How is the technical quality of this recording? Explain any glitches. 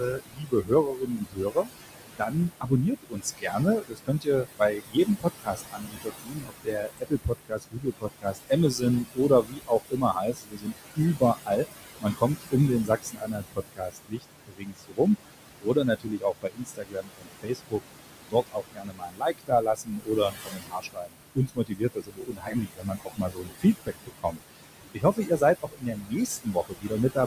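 The technical quality is hurt by a heavy-handed noise suppressor that struggles with a fairly loud room and ends up eating into the speech itself.

Noise suppressor artifacts run through the whole thing. The room noise sits only about 10 dB under the speech, and the suppressor pulls it down by about 20 dB between phrases, then lets it back up whenever speech starts. So the background pumps in and out with the talking.

Speech cut by the noise suppressor shows up in five stretches: 0.0 to 1.69 s, 2.18 to 11.65 s, 12.01 to 15.08 s, 15.6 to 17.81 s, and 18.3 to 27.18 s. The suppressor mistakes quieter parts of the speech for noise and ducks them by about 21 to 22 dB at worst. Soft consonants, word endings and quiet phrases get swallowed along with the background. It's patchy rather than continuous, adding up to several seconds of faint or missing bits in the longer spans.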